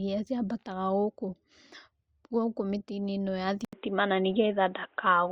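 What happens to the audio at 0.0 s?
Nothing goes wrong at 0.0 s: the audio is intact there, with no dropout, click or distortion at the start.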